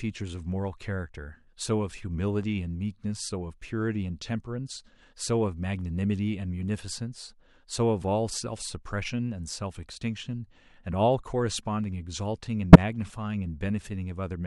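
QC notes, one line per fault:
12.73 to 12.76 s: corrupt frame decoded. A single damaged frame plays as a sharp burst, with misread codes putting energy at wrong frequencies.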